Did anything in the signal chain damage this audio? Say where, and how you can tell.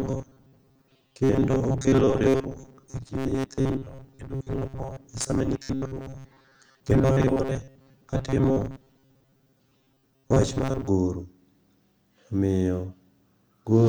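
Yes. From 0.01 to 10.87 s the speech has robotic sound from repeated short buffers: a rigid, metallic buzz at 134 Hz. This likely comes from the driver or buffer stage starving and replaying a 7.5 ms block, covering most of the audio.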